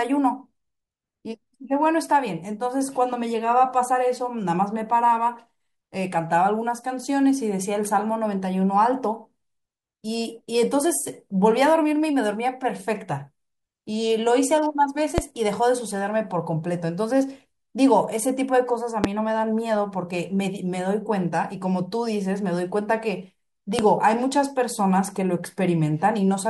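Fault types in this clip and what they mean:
Loud pop: single sharp pops at 15.18, 19.04 and 23.79 s, each about 30 ms and roughly 20 dB above the speech, which continues underneath. The likely cause is a voltage pulse from static or a switch. Waveform: tall narrow spike. Spectrogram: thin vertical line across all frequencies.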